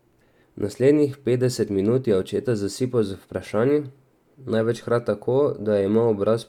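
Nothing in this recording stands out as a technical fault at any point; it's just someone talking, with nothing in the signal calling attention to itself.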